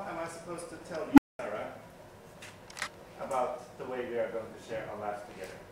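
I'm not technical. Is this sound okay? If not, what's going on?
No. At 1.12 s an unstable filter, a processing step that fed its own output back and kept amplifying it, ran out of control. A low beep swelled to a harsh, distorted peak within about 50 ms, then the sound cut out for about 0.2 s, returning at 1.39 s.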